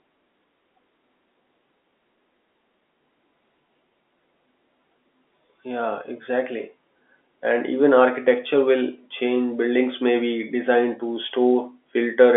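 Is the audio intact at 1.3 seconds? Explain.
Yes, the audio is intact at 1.3 seconds, with the telephone-band speech of the G.711 line carrying through that moment without any break or fault.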